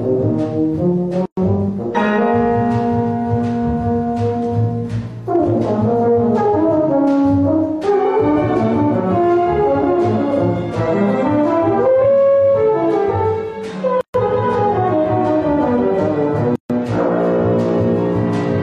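At 1.26 s, 14.01 s and 16.56 s the sound drops into silence for about 116, 133 and 142 ms, then resumes exactly where it stopped. These are gaps at joins of encoded pieces: untrimmed encoder start delay and end-of-piece padding. Unlike a dropout, nothing is lost, only paused, with smeared edges.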